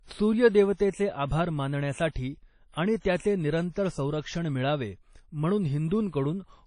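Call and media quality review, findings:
Ringing, washy speech throughout with hiss that swells and fades with the level; nothing above about 10.1 kHz. Likely WMA compression: transform codec with long blocks spreads quantisation noise over tens of milliseconds, zeroes weak spectral lines. Damage plainly audible; band limit and density of artefacts fit a low bitrate, around 32 kbps.

Pre-echo at 0.90–0.94 s: brief hiss ahead of a sharp onset, attack softened, smear about 33 ms. Second at 3.71–3.76 s, longer, about 55 ms. Same codec: attack late in a block, noise sized for the loud part fills the quiet lead-in.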